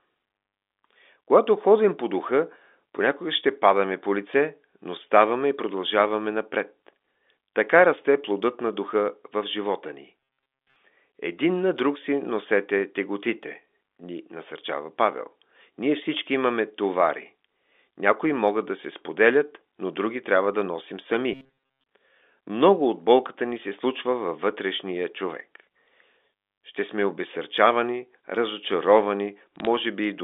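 From 10.20 to 10.76 s and again from 21.33 to 21.86 s, the speech turns into a rigid, metallic buzz at 134 Hz. That's robotic sound from repeated short buffers, likely caused by audio arriving too seldom and the last 7.5 ms or so being looped over most of the real signal. Then, at 29.56 to 29.67 s, a brief burst of sharp ticks crackles over the narrowband phone speech. Those are bit errors on a digital phone line, where a small fraction of flipped bits each changed single samples.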